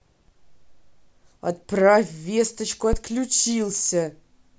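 Right around 2.93 s there's a phantom power thump cutting into the speech, lasting until about 3.00 s. Someone switched the supply on or off while the input was live, and that sudden DC step got pushed through the coupling capacitors into the signal. You hear it as a deep, dull thud peaking at about -9 dBFS, and it dies away fast, with a decay of roughly 16 ms, so it's a quick low punch rather than a long boom.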